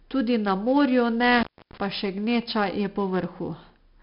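Speech, carried throughout by 4-bit ADPCM compression, heavily damaged: each loud syllable drags a gritty, level-following hiss, and nothing remains above 5.3 kHz, consistent with about 44 kbps. A spectrogram shows a hard ceiling there and noise filling gaps between harmonics. An intermittent contact cuts the signal from 1.38 to 1.78 s, open for about 0.30 s, with crackle at each edge; the waveform collapses to a thin hiss floor bracketed by sharp clicks.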